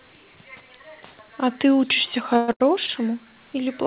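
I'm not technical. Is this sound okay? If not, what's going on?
No. Between 2.34 and 2.90 s there are repeated stalls (stutter): four times the sound briefly freezes and holds on, the longest about 110 ms. Unlike dropouts, nothing is lost. The audio just drags and catches before moving on, over the muffled, phone-like sound of the call.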